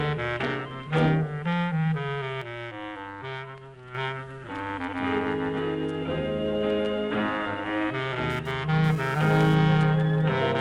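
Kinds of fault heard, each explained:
Sudden gain jump: at 2.4 s the level drops by about 6 dB in a single step, sound and background noise together, then jumps back at 3.9 s; likely a gain setting or bit shift applied instantly rather than ramped.
GSM phone buzz: from 8.3 to 9.5 s a hard, raspy buzz at 217 Hz with dense harmonics sits about 18 dB below the signal, unrelated to it, as a nearby 2G phone's transmit bursts are rectified; its intermittent presence fits a data transfer.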